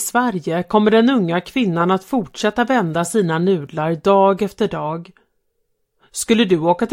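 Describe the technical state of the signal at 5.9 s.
At 5.9 s the signal is intact, with no dropout, distortion, clicks or other technical faults audible at that point.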